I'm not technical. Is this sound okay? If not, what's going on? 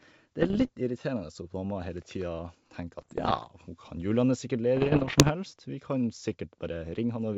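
No. There are bit errors on an ADPCM link: scattered flipped bits cause crackly pops and rough level jumps from 0.42 to 0.70 s, 2.99 to 3.48 s (just before "hun kan"), and 4.77 to 5.31 s (just before "vi kan"). Unlike a dropout, the sound keeps going but turns harsh for a moment.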